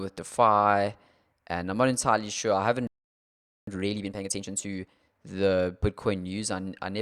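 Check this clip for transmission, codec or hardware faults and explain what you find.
Two linked playback faults, one after the other.

Playback stall, 2.87 to 3.67 s. The speech cuts out mid-flow and the output goes silent for about 0.8 s, then resumes. The likely cause is the player running short of buffered data, or its output thread being held up, so nothing reached the output until it recovered. What you hear is an abrupt gap of silence.

Time-compressed catch-up, 3.67 to 5.27 s. Right after the gap, the player works off the delay it built up by removing short slices of the signal and cross-fading across the joins. Delivery runs at about 1.5 times normal speed while the pitch stays where it was. The speech sounds rushed, and settles back to normal pace at 5.27 s.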